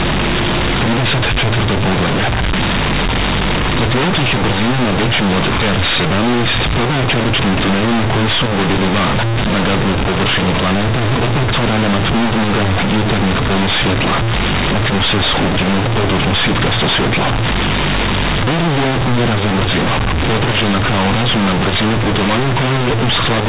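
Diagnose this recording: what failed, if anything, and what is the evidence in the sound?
The failure sits at the sample-format conversion stage: companded audio read as linear. The A-law telephone bytes are played as plain 8-bit samples without expansion, so every sign change throws the output across half its range. The whole clip sounds harsh, buzzy and overloaded, with quiet speech as loud as loud speech and heavy noise filling the pauses.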